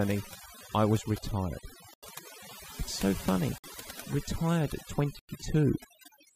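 From the first second this speech has overdone noise removal running the whole way through. The reduction is set so hard that any frequency band sitting close to what it thinks is noise gets pushed down or switched off, and the softer parts of the voice fall into that trap too. The background drops and breaks up into little twinkling specks.

Then there are three dropouts that sound like a Bluetooth stall. Right after "I was retired" the audio goes silent from 1.94 to 2.03 s, about 89 ms. After "so funny" it cuts out from 3.58 to 3.64 s, about 56 ms. The third hole runs from 5.19 to 5.29 s, about 98 ms. Each time the sound just stops dead and then carries on. The likely cause is interference delaying packets until the headphone buffer emptied and playback had to wait for the resends.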